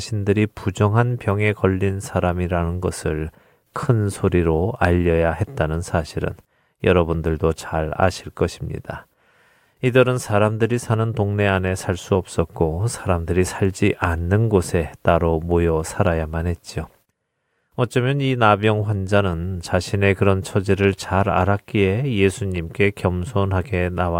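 No technical faults can be heard anywhere in the speech.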